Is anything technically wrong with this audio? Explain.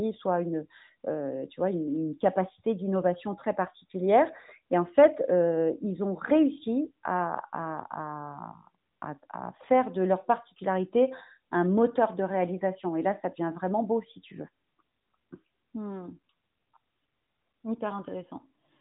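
No, nothing in this speech recording stood out as a technical problem on listening.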